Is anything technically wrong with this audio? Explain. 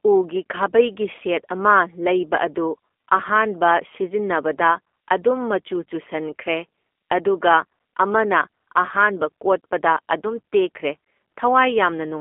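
Yes. Throughout, the speech carries G.729 codec damage, which fits an 8 kbit/s VoIP link: each frame is rebuilt from a vocal tract filter, a pitch predictor and a few pulses. It sounds plainly rough and synthetic, confined to roughly 250 Hz to 3.4 kHz, with nothing above 3.5 kHz.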